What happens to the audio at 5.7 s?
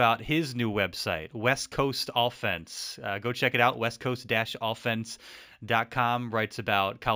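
At 5.7 s, as throughout the clip, there is imaging from linear upsampling. The sound points to a 16 kHz to 48 kHz conversion done by straight-line interpolation. This dulls the top of the speech band and leaves a faint mirrored copy, roughly 25 dB down, between 8 and 16 kHz. It is heard as a light metallic shimmer on sibilants. On a spectrogram, a fainter reflection of the band sits above 8 kHz.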